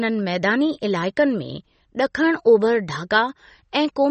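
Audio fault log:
Throughout: MP3 compression. Nothing sounds above 8.3 kHz, and the speech has a plainly audible watery, swirling quality with smeared onsets as weak frequency lines flicker on and off between frames. The likely cause is a bit-starved MP3 encode, which fits 32 kbps.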